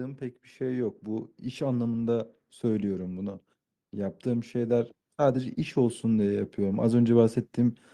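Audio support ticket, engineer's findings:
Automatic gain rising, twice. First swell 0.05 to 3.09 s, level climbs about 5 dB; second 3.91 to 7.85 s, about 7 dB. Voice and room noise lift together, slow ramp over seconds, no step. Component: AGC on the capture side, judging input too quiet and walking gain up. Gap between ramps suggests it paused near 3.1 s, then started climbing again.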